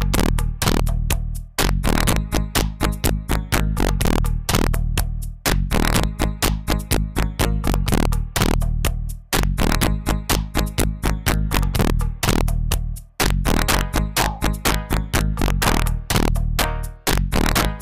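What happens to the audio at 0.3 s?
At 0.3 s, as throughout the clip, the level is driven about 13 dB past full scale and the integer samples wrap to the opposite sign instead of being limited. This integer overflow turns every peak over the limit, a small share of samples, into violent cracks far harsher than clipping.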